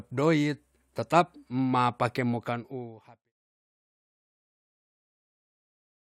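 Speech recording with no technical faults to report. The level tapers off in a smooth fade out beginning at roughly 2 s and reaching silence by 3.33 s, with no click or hard edge.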